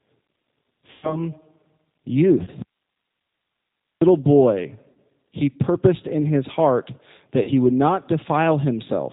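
Speech carried over a G.729 (8 kbit/s) link throughout, and the codec's damage is plainly audible. Nothing above 4 kHz survives, and the voice has the slightly rough, synthetic grain of a decoder rebuilding each 10 ms frame from a vocal tract filter, a pitch predictor and a handful of pulses. That grain stays constant from start to finish, which separates it from the brief local faults. VoIP packet loss concealed by the speech codec occurs four times. The longest is at 0.91 to 1.24 s, where about 120 ms of signal was lost. Shorter ones, each about 40 ms, occur at 2.43 to 2.50 s, at 4.92 to 4.97 s just before "he purposed in his", and at 7.43 to 7.50 s between "purposed in his heart" and "would not". In each, the decoder keeps repeating its last pitch and filter at falling gain, so the sound is stretched and fades, and the voice stays weak or distorted briefly after real packets resume. 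An audio dropout to a faint residue runs from 2.62 to 4.01 s, roughly 1.4 s. The sound cuts off abruptly and leaves only hiss about 55 dB below the speech, then returns mid-flow at "boy he purposed in". This likely comes from the wanted signal being lost while the path after the break stayed live. Unlike concealment, this gap holds no extrapolated buzz, and unlike a natural pause or fade, both edges are hard.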